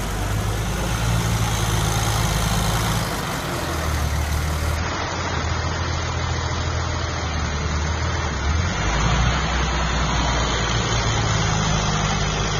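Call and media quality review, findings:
Adaptive stream at a lower bitrate, 4.76 s to end. Abrupt treble loss with no gap, swirly codec artefacts. Spectrogram: content above 6.9 kHz cut flat from 4.76 s, waveform continuous. Player switched renditions, consistent with AAC falling from about 96 to 24 kbit/s.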